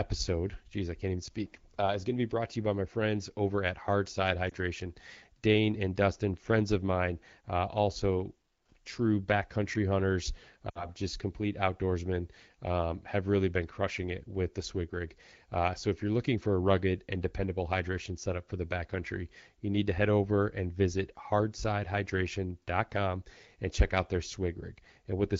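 Lost AMR speech frames hit at 4.50 to 4.52 s as a brief warble, and at 10.69 to 10.86 s, between "also true backcountry hunters" and "just complete outdoorsmen um", where 60 ms of sound, about three frames, fades to near silence within two frames. Unlike a hard dropout, the decoder keeps guessing with falling gain rather than cutting to silence.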